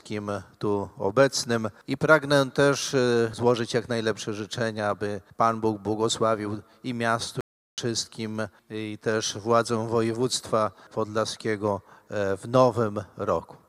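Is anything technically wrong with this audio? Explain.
Yes. From 7.41 to 7.78 s there is a playback stall: the sound cuts out mid-flow for about 0.37 s, then resumes, likely because the player's buffer ran dry or its thread was blocked. The waveform drops abruptly to a flat line, and the spectrogram shows a clean blank gap.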